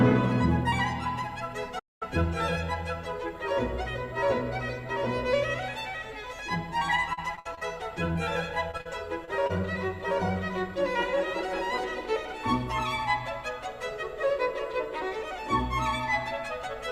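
At 1.79 s the audio halts for about 0.22 s, until 2.03 s, then resumes. This is a playback stall, most likely the player starving for data or its output thread being blocked, so nothing reaches the output. What sets it apart from packet loss is that the gap is true silence with no attempt to fill it: no continued tone, no noise, just a clean stop and a restart.

From 7.13 to 7.63 s the sound turns choppy. This is repeated packet loss with the robotic sound that comes from it. Five separate holes, about 160 ms missing in all and the longest about 58 ms, were each bridged by extending the preceding sound, so roughly a third of that half-second is synthetic. Unlike a stall, there is no silence. Unlike the isolated losses that follow, the patches come so close together that they merge into one choppy stretch.

Shorter, isolated holes follow at 8.13, 8.71, 8.77, 8.81, 9.25 and 9.47 s. These are short concealed packet losses. 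Each is about 20 ms of missing audio, except the one at 8.81 s, which is closer to 40 ms. Each was patched by continuing the last sound and then cross-fading back into the real signal. They come through as brief smears rather than a sustained robotic quality, and the 8.71 to 8.87 s cluster sounds like a short wobble.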